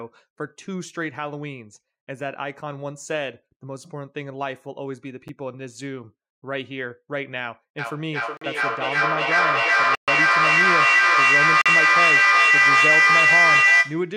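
At 5.28 s there is a block of digital silence about 9 ms long, heard as a tick. The output buffer likely went unfilled, so the sound drops out abruptly. From 7.79 s to the end, a feedback howl builds near 2 kHz. It pulses roughly every 400 ms and peaks about 12 dB above the speech. The microphone-to-loudspeaker loop gains level on each pass. More silent blocks cut in at 8.37 s and 11.61 s, 43 ms each, which fits a 2048-sample buffer. A longer one runs from 9.95 to 10.08 s, 128 ms.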